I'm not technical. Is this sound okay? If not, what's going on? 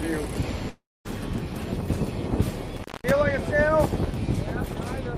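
No. From 0.69 to 1.07 s the sound smears into a fading buzz, goes quiet, then resumes with roughly a third of a second missing, likely a long network dropout. From 2.77 to 3.11 s it crackles and cuts out for about 0.21 s, leaving faint hiss: an intermittent contact, such as a loose cable or plug.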